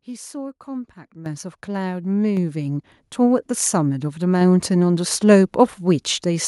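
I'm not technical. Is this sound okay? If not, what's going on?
No. The microphone volume stepped up twice, at 1.26 s and again at 2.37 s. The call software raised the microphone level in sudden steps. The voice and the background get louder together. The first jump is large, and the second is smaller.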